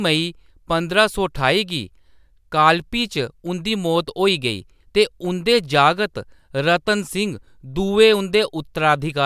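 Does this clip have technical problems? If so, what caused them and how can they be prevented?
No, there are no technical problems in this recording.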